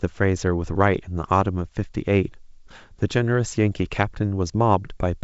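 Speech over G.722 wideband coding; no faults heard.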